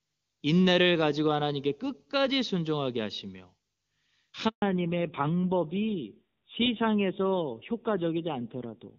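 A handover gap in this speech recording, as the call switched networks, left 140 ms with no speech frames: the voice dies away at 4.48 s and stays silent until 4.62 s. From 4.62 s to the end the call falls back to narrowband coding, so nothing above 4 kHz remains and the voice turns duller and rougher than the clear AMR-WB HD Voice sound of the first half, which fits a low-rate AMR-NB mode around 7.4 kbit/s.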